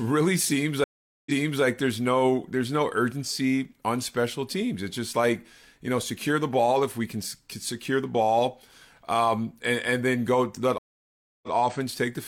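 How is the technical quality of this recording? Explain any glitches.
Two stream reconnects interrupt the speech. At 0.84 to 1.63 s, about 0.42 s of silence is followed by audio that restarts 372 ms earlier than where it broke off. At 10.78 to 11.52 s, 0.65 s of silence is followed by a 93 ms step back. Each time the connection dropped, a fresh decoder started mid-stream, and the server resent a short burst, so a fragment repeats after the gap. On a waveform or spectrogram, each appears as a flat, empty block, then a brief fade-in and a repeated stretch of the preceding pattern.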